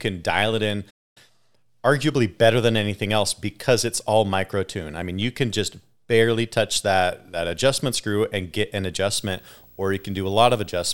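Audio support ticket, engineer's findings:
Playback stall, 0.90 to 1.17 s: speech halts mid-flow for roughly 0.26 s of silence, then resumes. Likely a starved output buffer or blocked player thread.

Video or display buzz, 9.15 s to end of clip: buzz at 59.94 Hz with hash above it, plus a 15.7 kHz line-rate whine, well below the speech. Screen or video cable coupling into the audio path. The 59.94 Hz field rate and the line tone rule out 60 Hz mains hum.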